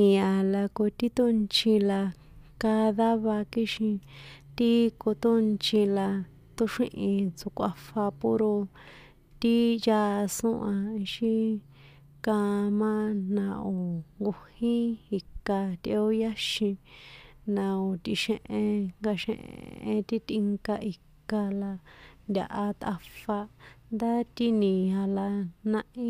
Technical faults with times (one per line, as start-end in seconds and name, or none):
19.41-19.83 system hang loop